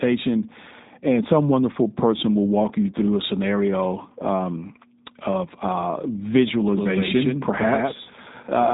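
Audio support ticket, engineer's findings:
G.729 codec damage, throughout the speech. Nothing above 3.8 kHz; top end missing, dull telephone-band sound. Plainly audible roughness and a slightly synthetic, buzzy texture. Consistent with an 8 kbit/s G.729A path: the voice is rebuilt from a vocal-tract filter, a pitch predictor and a few pulses per 5 ms subframe, not carried as a waveform. Probable component: VoIP leg or gateway transcoding.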